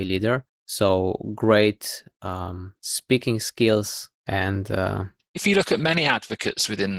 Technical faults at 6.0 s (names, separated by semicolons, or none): Opus voice compression